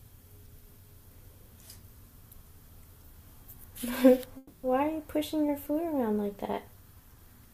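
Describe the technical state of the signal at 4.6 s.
At 4.6 s the signal is inside a call audio freeze, running from 4.37 to 4.65 s. The last sound is stretched into a fading buzz or hiss for about 260 ms. This is likely a jitter buffer running dry while packets were delayed. Audio then resumes where it stopped, with nothing lost, just pushed later.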